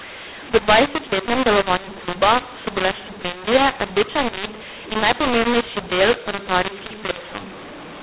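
From start to finish, the speech carries a mu-law and A-law mix-up: samples written with mu-law are read back as A-law, so each 8-bit code lands on the wrong level. Loud and soft parts are rescaled unevenly, making the speech harsh and gritty, and pauses fill with hiss instead of falling silent. Clipping distorts only the peaks, whereas here the damage reaches the quiet passages, and the 4 kHz telephone band of the G.711 coding remains intact.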